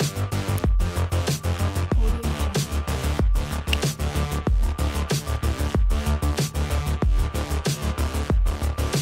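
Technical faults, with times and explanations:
0.58 s and 3.73 s, electrical switching spike: a nearby switch or motor likely arced into the audio line, laying two sharp, brief snaps over the sound, the second louder at about -10 dBFS.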